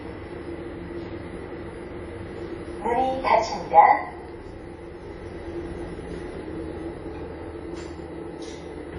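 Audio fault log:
Throughout, WMA compression: nothing remains above 10.1 kHz, and the audio carries a plainly audible washy, ringing smear with hiss that swells and fades with the signal. This is likely a WMA transform encode at a low rate, which fits about 32 kbps. Long transform blocks spread quantisation noise over tens of milliseconds and weak components are zeroed. That smeared breathing sets it apart from a clean low-pass filter, which would only dull the top without adding hiss.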